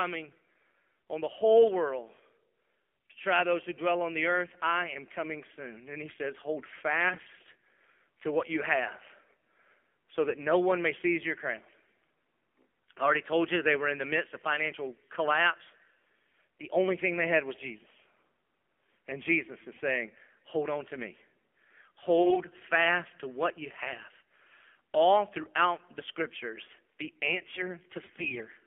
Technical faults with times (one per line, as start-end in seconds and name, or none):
0.00-28.67 AMR narrowband mobile codec
7.10-7.33 AMR bit errors
22.18-22.41 AMR bit errors
28.06-28.48 AMR bit errors